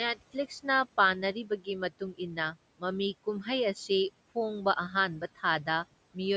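Speech cut by the noise suppressor, from 1.34 to 1.67 s: the suppressor misjudged part of the speech as background and pulled it down along with the room noise, by about 13 dB at its deepest. Only about 150 ms within that window is affected, and the softer sounds there come out swallowed and faint.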